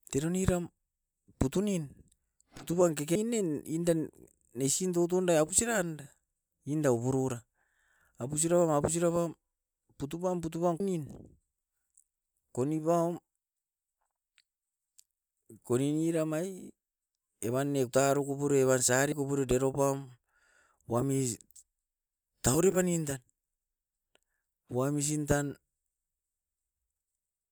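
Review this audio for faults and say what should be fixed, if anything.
Compressed frames skipped: at 3.15, 10.80, 17.87 and 19.12 s the decoder skipped whole frames of the compressed stream, most likely because those frames were lost or rejected as corrupt. Each gap suggests whole frames of around 32 ms. The speech lurches forward by roughly 100 ms at 3.15 and 17.87 s, about 200 ms at 10.80 s, and about 70 ms at 19.12 s. Check the file's integrity and the delivery path, and re-encode or re-send from a clean source so that no frames are dropped or refused by the decoder.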